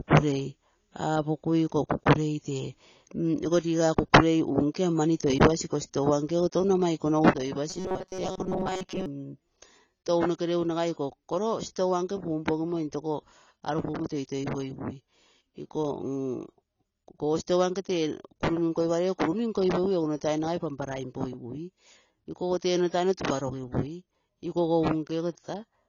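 Throughout the clip, the artefacts of an earlier low-bitrate encode remain, despite an MP3 at what looks like a generous bitrate. This is low-bitrate audio saved at a high bitrate, likely from a small AAC encode: the re-encode cannot restore what the first encode removed.

From 7.31 s to the end, one channel drops out. The mono level falls abruptly by about 6 dB, visible as a clean step down in the waveform envelope. That halving of the shared content likely means one stereo side vanished before summing.

Between 7.70 and 9.06 s, robotic sound from repeated short buffers takes over: a rigid, metallic buzz at 188 Hz that still loosely tracks the speech. Most of this stretch is repeated audio, likely from a starved playback buffer looping about 5.3 ms chunks, drawn as evenly spaced horizontal harmonics.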